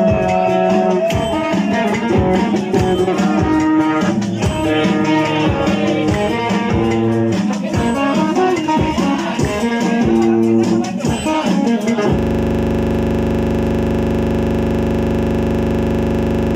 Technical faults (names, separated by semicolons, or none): system hang loop